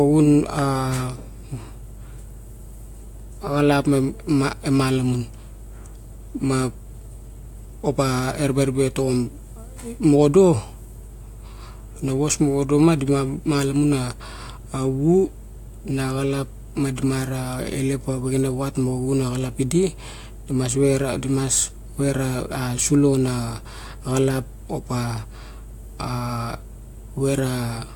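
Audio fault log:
The speech signal shows no technical faults at any point.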